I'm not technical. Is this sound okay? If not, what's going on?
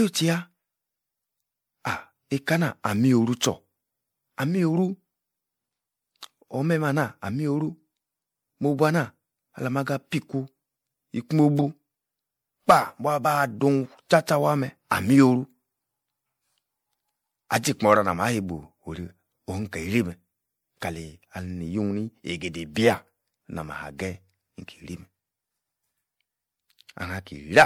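No. Generation loss runs through the whole recording, from start to finish. The speech sounds swirly, smeared and hollow, and the starts of sounds are blurred rather than crisp. This is likely from the audio being saved as an MP3, opened, and saved as an MP3 again about four times. Each save throws away a little more detail in a slightly different place, so the small damage from every pass piles up.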